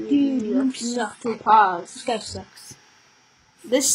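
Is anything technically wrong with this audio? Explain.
Yes. From 0 to 2.5 s the audio shows an adaptive stream starting at a low bitrate. The player opened on a very lean encoding, consistent with roughly 12 kbit/s HE-AAC, and switched up once its throughput estimate settled. Until then the top end sounds thin and synthetic, with nothing above 11.1 kHz and swirly codec smearing. At 2.5 s the clarity jumps, with no gap, to what suggests 96 kbit/s AAC. A spectrogram shows a hard ceiling that suddenly lifts there, with an unbroken waveform.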